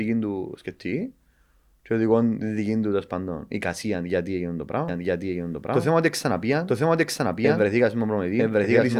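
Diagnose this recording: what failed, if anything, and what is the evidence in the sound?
Doubled audio track from 4.88 s onward: an equally loud copy about one second behind, abrupt, undecayed, unlike echo, likely a second, slower capture path.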